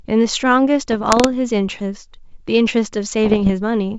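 From 0.92 to 1.27 s, bit errors on an ADPCM link cause pops and rough bursts, with brief jumps in level. Each flipped bit throws off the decoder's step size and predictor, so the damage rings on briefly. It returns from 3.24 to 3.51 s, denser.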